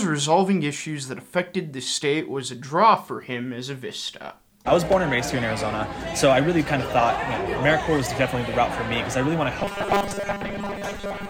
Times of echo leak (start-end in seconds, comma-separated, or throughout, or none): none